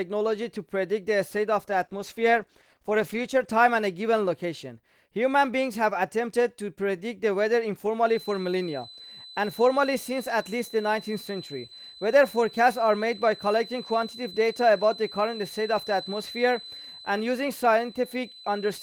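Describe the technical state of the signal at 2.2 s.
At 2.2 s the speech sits inside a call bitrate drop running from 1.60 to 3.57 s. The encoder is starved of bits, consistent with a fall from 32 to 15 kbps. Coding turns coarse and the top end is cut. The speech sounds rough, watery or muffled.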